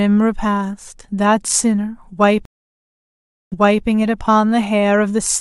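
At 2.45 s the speech drops out for about 1.06 s, the mark of a stream reconnect: the connection failed and a fresh decoder started mid-stream. When sound returns it repeats 0.34 s of earlier material, as a server burst would, before normal flow resumes by 3.86 s.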